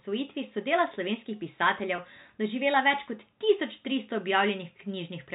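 At 1.96 to 1.98 s, just before "doživela več kot tisoč", there is a packet loss with pitch repetition. About 20 ms of speech went missing, which fits one lost packet. The receiver bridged it by repeating the last pitch period. It sounds like a brief, slightly buzzy hold.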